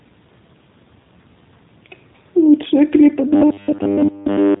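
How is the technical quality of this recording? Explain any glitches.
The recording is clearly degraded: a low-bitrate codec colours the whole clip, and the final stretch breaks down into a robotic buzz.

The G.729 codec damage runs from start to finish. Speech is rebuilt from a vocal-tract filter, pitch predictor and a few pulses per frame, which fits an 8 kbit/s G.729A encoding. It sounds rough and synthetic. A spectrogram shows a hard ceiling at 3.8 kHz, with nothing above it.

From 3.28 s to the end, the speech turns into a robotic sound from repeated short buffers. A rigid metallic buzz at 100 Hz follows the speech contour only loosely. That rate fits repeated 10 ms chunks, most likely because audio arrived too slowly and the last chunk was replayed while most of the real signal was skipped. The waveform shows roughly repeating 10 ms cycles, and the spectrogram shows evenly spaced harmonic lines at 100 Hz.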